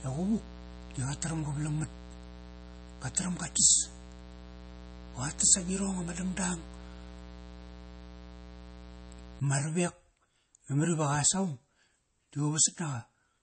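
From the start until 9.4 s, a mains buzz sits under the speech: a steady, raspy drone locked to 60 Hz. Sharp switching spikes, twice per mains cycle, enter the signal path, so the buzz carries a dense ladder of harmonics up into the kilohertz range, about 15 dB below the speech. On a spectrogram it shows as evenly spaced horizontal lines at multiples of 60 Hz that stop abruptly at 9.4 s. The waveform shows a fine, regular ripple between syllables.

Across the whole clip the speech has a watery, swirling quality with smeared consonant onsets and metallic chirps on s sounds, likely from MP3 compression at a bitrate that sounds like about 32 kbps. With so few bits, the encoder cuts the treble above a fixed frequency and drops weaker frequency components that flicker in and out between frames. A spectrogram shows a hard ceiling with nothing above 8.3 kHz, and below it, isolated blocks of energy scattered like confetti.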